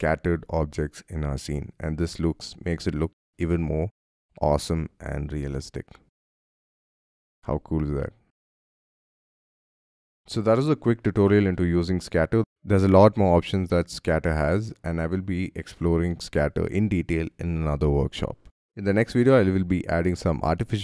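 No technical faults can be heard anywhere in the audio. Nothing breaks up, drops out or distorts at any point.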